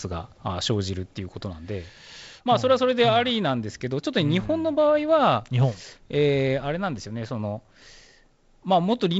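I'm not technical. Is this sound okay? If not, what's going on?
Yes, nothing has gone wrong with this speech recording. It has the sound of a wideband phone call using G.722 wideband telephone coding, so nothing above about 7.7 kHz comes through and there is a light trace of that coding in the sound.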